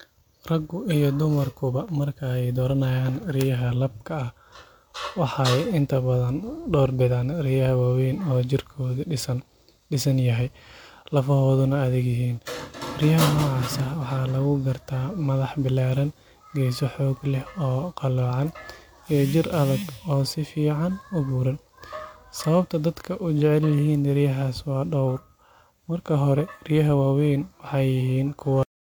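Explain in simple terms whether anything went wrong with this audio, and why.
Two things went wrong in this speech recording.

The first is a corrupt frame decoded, at about 0.90 to 0.94 seconds, just before "dumarkuba marka ay dooranayaan". Compressed audio is stored in small chunks called frames. A few of them were damaged, but the player decoded them anyway. The garbled data put sound at the wrong pitches. So you hear a brief chirp or burst of noise lasting only a few hundredths of a second.

The second is a cut-off end. At 28.63 seconds the audio stops dead, partway through a sound. The last part of the recording was never saved or played out. So instead of fading away naturally, the sound drops straight into complete silence. That final third of a second is empty. The sudden stop may also leave a click.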